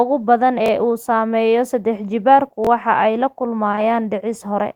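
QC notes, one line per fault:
0.66–0.68 s and 2.65–2.67 s, repeated buffer: at both spots a slice of speech about 21 ms long plays twice in a row, with a hard join where the copy starts. That length fits a 1024-sample buffer. Fresh audio didn't arrive in time, so the device looped the last chunk, and around 20 ms of real speech got skipped each time.
3.71–3.79 s, short concealed packet loss: two back-to-back losses, each leaving about 20 ms of the call missing at the decoder. The receiver papered over each hole by stretching the preceding sound, carrying on its pitch where it was voiced and filling with shaped noise where it wasn't, then blending back into the real audio. Two patches in a row give a brief smeared wobble across that stretch.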